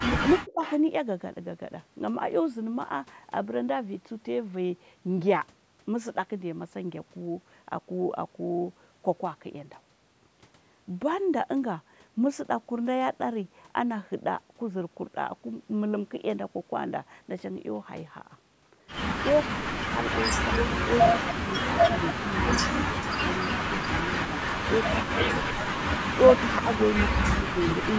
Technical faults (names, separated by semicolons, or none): echo leak; speech suppressed in double talk